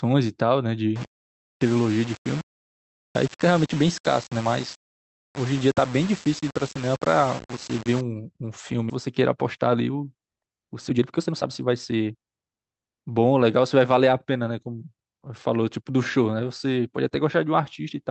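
Low bit depth without dither runs from 0.96 to 8.01 s. The speech carries grainy, gritty distortion that follows its level, with noise only about 15 dB below the signal. It is likely caused by rounding to about 5 bits without dither, so quiet stretches sputter between coarse steps.

A skip ahead follows at 8.89 to 8.91 s. Roughly a second of speech is simply gone, and playback jumps forward with no fill, the two sides butted together. It fits a receiver discarding waiting audio to cut about a second of built-up delay.

Jitter buffer speed-up then runs from 9.07 to 12.89 s. The receiver trims many short pitch-period pieces in a row to drain excess buffered audio, about half a second in total, so the speech plays at roughly 115 % speed, hurried but at unchanged pitch, over the Opus call path's 8 kHz bandwidth.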